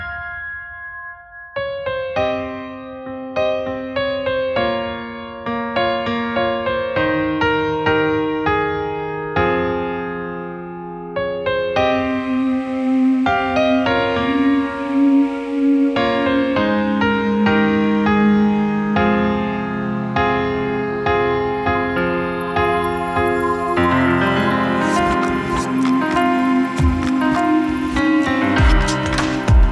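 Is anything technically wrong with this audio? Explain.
No, nothing technically wrong stands out here, and the audio sounds steady and intact the whole way.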